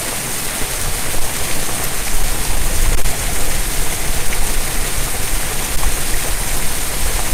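A stage in the chain is overdriven by about 6 dB, so the loudest peaks, roughly one and a half percent of the samples, are sliced flat. This hard clipping adds upper harmonics, heard as crackle and grit on the louder moments of these everyday sounds throughout.

From 1.80 to 3.33 s the jitter buffer had built up too much audio and sped up to shed it, cutting out short pitch-period slices totalling around 70 ms. Playback runs at 104 percent while the pitch of the sounds stays unchanged.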